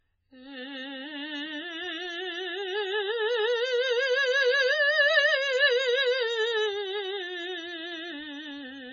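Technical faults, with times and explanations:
Throughout, MP3 compression: watery, swirling music with smeared attacks and nothing above 7.1 kHz, likely a bit-starved MP3 encode, which fits a bitrate near 16 kbps.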